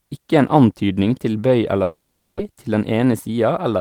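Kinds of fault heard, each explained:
Long network dropout: at 1.83 to 2.41 s, just after "en antydning til bøy", the last sound is stretched into a fading buzz lasting about 0.56 s with no silent gap, likely from packets not arriving; 0.4 s of audio is lost when sound resumes.
Jitter buffer speed-up: from 2.50 s to the end, the receiver trims repeated pitch-period slices to shed roughly 150 ms of built-up delay, so the audio runs about 9% fast at unchanged pitch and sounds hurried.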